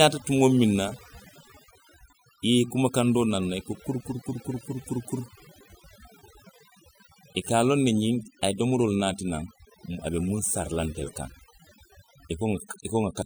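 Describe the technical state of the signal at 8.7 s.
At 8.7 s the speech carries overdone noise removal, present throughout the clip. Bands near the noise estimate are gated to nothing, taking quiet speech detail with them, so pauses sound near-silent with twinkling specks. A spectrogram shows scattered isolated dots in gaps and holes eaten into the speech harmonics.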